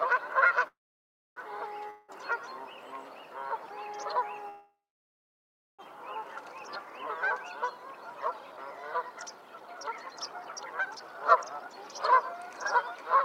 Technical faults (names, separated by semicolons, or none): call audio freeze; long network dropout; jitter buffer speed-up